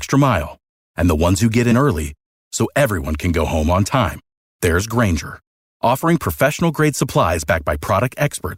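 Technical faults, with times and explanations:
1.71–1.73 s, compressed frames skipped: right after "ones who get" it jumps to "early so everyone can", losing about 30 ms, which fits a few 10 ms frames dropped.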